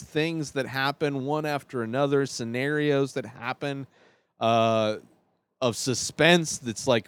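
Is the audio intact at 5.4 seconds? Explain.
Yes, at 5.4 seconds the speech plays through intact, with no dropout, click, distortion or other fault heard at that moment.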